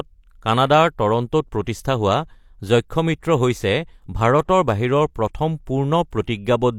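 Pre-echo at 6.11 s and from 6.25 to 6.28 s: the codec spread each block's quantisation noise before a sharp attack, heard as a brief hiss and smeared onsets.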